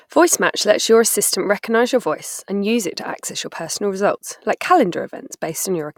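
At 4.18 s, just after "to access your personal", an overlap between stream segments cuts about 5 ms of speech, so the waveform jumps and a brief click or skip is heard. Unlike a dropout, no silence is inserted; the lost sound simply vanishes.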